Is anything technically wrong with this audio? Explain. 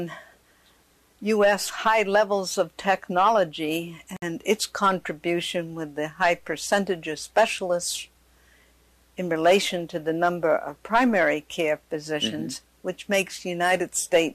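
Yes. At 4.17 to 4.22 s, a gap at a join of encoded pieces: separately encoded segments kept their start delay and end padding, dropping in a 58 ms gap with smeared edges, seen as a blank vertical strip.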